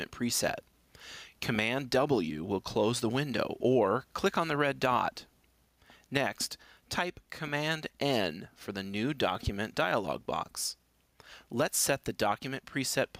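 Input gain set far too high for the microphone, with a fast limiter or compressor likely clamping it down on every loud sound, produces gain pumping that runs through the whole clip. Each time a loud sound arrives, the level is yanked down by around 10 dB. Loud and quiet passages sit unnaturally close in level, leaving the sound squashed and breathing.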